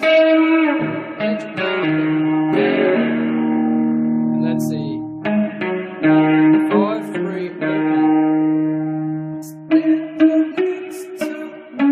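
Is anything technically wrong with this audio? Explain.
Yes. Compressed frames are skipped at 1.82 s, 5.52 s, 9.42 s and 10.51–10.53 s. Whole 23.2 ms frames go missing, so the audio jumps ahead by roughly 200, 70, 100 and 200 ms. On a waveform, the envelope changes abruptly there. A spectrogram shows a short vertical seam where the patterns fail to line up.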